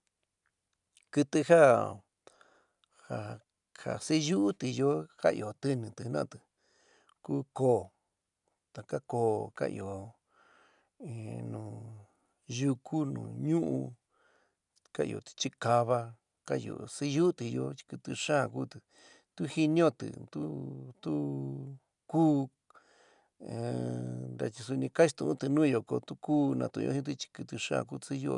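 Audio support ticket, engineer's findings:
Listened in full, nothing stood out; no findings to log against the playback or capture path.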